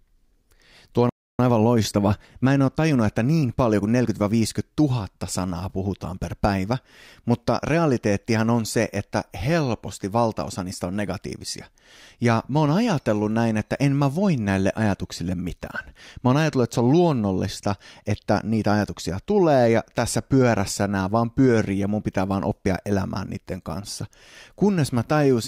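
At about 1.09 s the speech just drops out mid-flow and stays silent until 1.39 s, roughly 295 ms of dead air, before carrying on where it left off. That's a playback stall. The likely culprit is the player running dry on data or having its audio thread held up, so there was nothing to feed the output until it caught up.

Right after, from 1.39 s to 4.33 s, you get time-compressed catch-up. The player is clawing back that backlog by trimming tiny slices out of the audio and cross-fading the joins, running things at about 1.1 times normal speed. The pitch stays put, so it doesn't sound chipmunky. It just comes across as a bit rushed for those three seconds or so.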